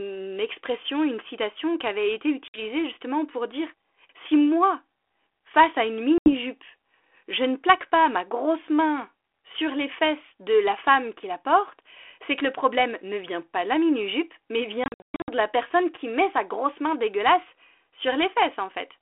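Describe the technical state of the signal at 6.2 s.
At 6.2 s the speech falls into a hard-edged silent gap starting at 6.18 s, packet loss on an ADPCM call lasting to 6.34 s: about 80 ms of packets dropped. The decoder's adaptive predictor and step size lose track of the sender, so the 32 kbit/s G.726 audio resumes slightly distorted before settling.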